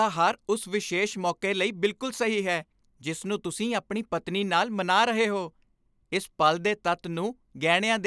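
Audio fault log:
No faults are present in this speech recording. Nothing heard in it calls for an entry.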